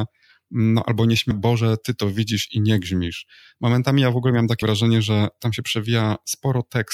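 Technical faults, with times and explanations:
1.30 s and 4.59–4.63 s, damaged data in a compressed stream: corrupted bytes made the decoder misread frames and resynchronise, causing a brief glitch in the speech. A spectrogram shows a narrow vertical smear of broadband or garbled energy, and the waveform shows an abrupt discontinuity there.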